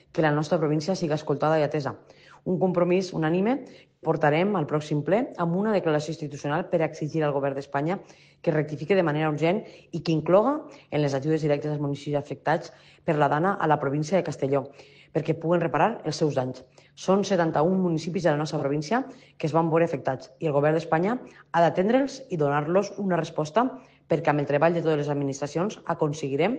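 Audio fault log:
3.90 to 4.08 s and 18.57 s, AAC frame loss with concealment: two short patches where the audio turns smeared and noisy, about 128 ms at 3.90 s and about 43 ms at 18.57 s. The decoder lost frames and reused the last good spectrum with altered phases, which explains the phasey wash. The lengths fit three and one AAC frames. Unlike a dropout, the gap is filled with blurred sound rather than silence or a click.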